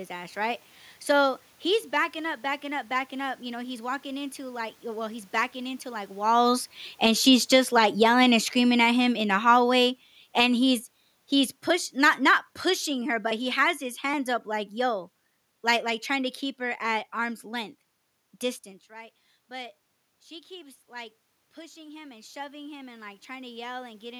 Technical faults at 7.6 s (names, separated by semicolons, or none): automatic gain falling